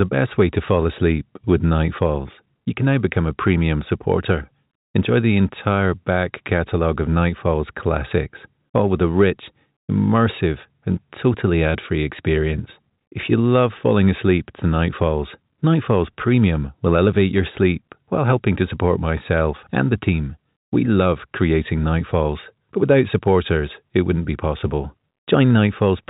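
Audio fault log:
No faults found; the speech reached the listener over a WebRTC call path, with nothing above 4 kHz, which fits a G.711 mu-law link at 64 kbps.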